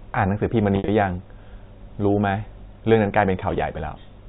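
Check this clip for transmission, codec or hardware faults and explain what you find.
One transmission fault is present, in audio carried over G.711 A-law telephone coding with nothing above 4 kHz. Packet loss with pitch repetition occurs from 0.76 to 0.88 s. About 100 ms of packets went missing, and the receiver bridged them by repeating the last pitch period. The sound briefly holds with a buzzy, frozen quality, and the longest 60 ms gap fades toward silence.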